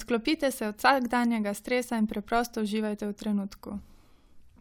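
No faults turn up anywhere in the recording; the speech runs its full course without dropouts, clicks, distortion or timing problems.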